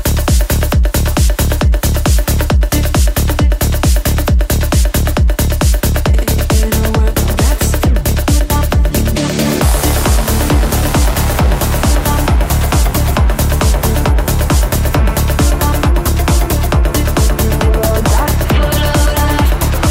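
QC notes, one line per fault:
No faults heard anywhere in this clip.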